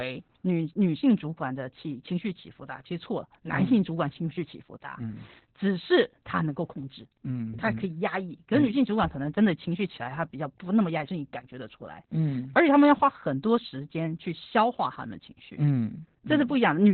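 Throughout, Opus voice compression is running in its SILK speech mode at what sounds like a very low rate, around 8 kbps, with the band narrowed so nothing survives above about 4.2 kHz. The speech comes out muffled and telephone-like, with a hoarse, slightly robotic edge from the coarsely coded excitation.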